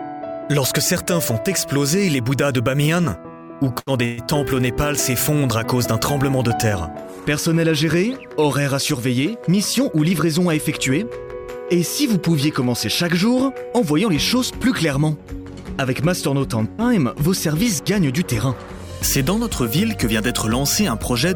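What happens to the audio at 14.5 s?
Nothing goes wrong at 14.5 s; the audio plays through that moment intact, with no dropout, click, distortion or other fault.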